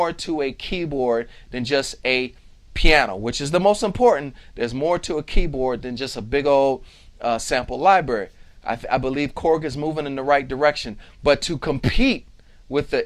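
No technical fault can be heard anywhere in this audio. There is nothing here that calls for a time or a cause.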